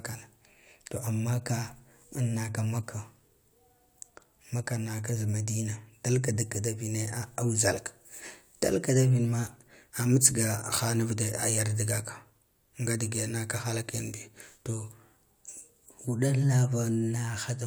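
Speech, with no technical fault to be heard anywhere in the recording. There is nothing here that calls for a time or a cause.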